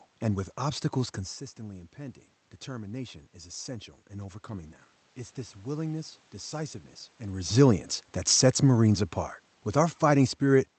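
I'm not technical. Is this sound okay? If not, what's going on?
No. Just after "and with obstacles", from about 1.57 to 4.78 seconds, there is automatic gain rising. The talker had drifted away from the microphone around the 1-second mark, so the recording system slowly turned its own volume up to compensate. You can tell it's the system and not the person moving because the room's background noise swells right along with the voice, gradually over a few seconds, rather than the voice alone changing.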